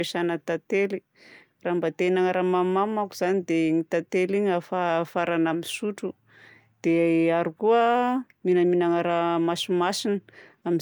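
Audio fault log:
Nothing stood out on listening to this speech recording.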